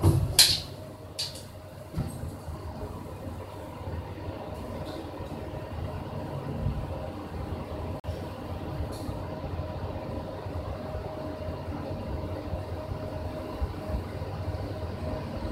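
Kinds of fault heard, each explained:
Gap between stream segments: a hard-edged hole of silence, about 42 ms long, cuts into the sound at 8.00 s and the sound resumes at 8.04 s. The timestamps of two consecutive segments don't quite meet, so the player fills the hole with silence. No audio is lost.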